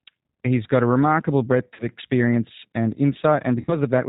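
Speech that sounds slightly rough and synthetic throughout, with nothing above 4 kHz, is the signature of the G.729 codec. The sound is rebuilt from a vocal-tract filter, a pitch predictor and a few pulses per frame, which fits an 8 kbit/s G.729A stream. At 1.74–1.85 s and again at 3.56–3.72 s, the speech smears into a fading buzzy tone or coloured noise, then stays weak for a moment after. This is VoIP packet loss concealed by the speech codec. The decoder extends its last pitch and filter through gaps of about 50 ms in the first event. In the second it fills about 70 ms of scattered losses across 120 ms, the longest run lasting 30 ms.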